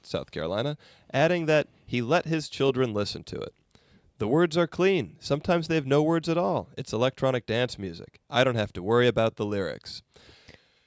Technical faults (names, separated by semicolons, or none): none